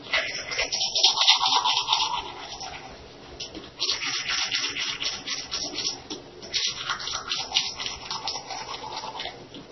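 Throughout, nothing sounds above 5.9 kHz, and the texture turns watery and swirly. This is likely heavy MP3 compression, fitting a very low bitrate near 24 kbps.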